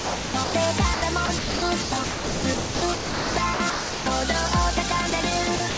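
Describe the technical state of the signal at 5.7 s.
At 5.7 s the signal sits inside a stretch of sound chopped by the voice detector, running from 5.56 s to the end at 5.78 s. About 124 ms of the sound drops out and is replaced by a flat, synthetic hiss, which likely comes from the sender's detector gating the signal off and the receiver filling the gap with comfort noise. That noise-like fill is what sets it apart from a plain dropout, which would go silent, or from packet-loss concealment, which would smear or repeat the preceding waveform. Around it, the G.722 call path carries nothing above 8 kHz.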